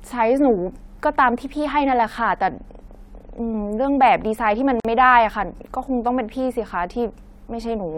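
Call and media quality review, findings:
Short dropout in continuous speech at 4.80–4.85 s, a gap of about 46 ms with smeared edges, then speech resumes where it stopped. Gap at a join of encoded pieces: separately encoded segments concatenated untrimmed, encoder start delay and last-frame padding left in.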